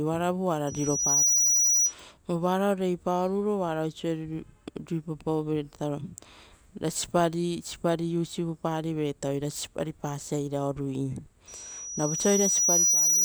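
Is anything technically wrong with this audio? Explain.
Yes, loudspeaker feedback squeal occurs twice in this speech, from 0.67 to 1.94 s and from 11.48 s to the end. The microphone picks up its own loudspeaker, and around 5.8 kHz the loop gain passes one, so that tone feeds itself. It swells in under a second the first time and over about a second and a half the second, ending a few dB above the speech. A spectrogram shows a bright horizontal line at 5.8 kHz, and the waveform envelope bulges as it grows.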